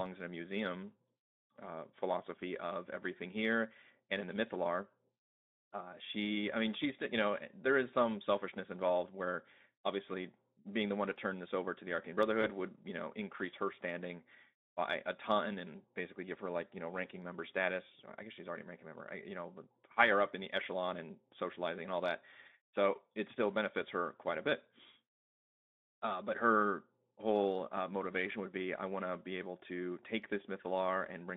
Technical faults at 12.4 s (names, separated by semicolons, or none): VoIP packet loss concealed by the speech codec